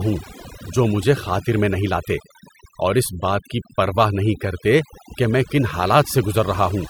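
From start to finish, the speech carries the marks of overdone noise removal. A noise reducer was pushed too hard, so any frequency band sitting close to its idea of the noise floor gets pulled way down or shut off entirely, and the softer parts of the voice are cut along with the hiss. The background drops away between phrases and breaks up into little twinkling specks.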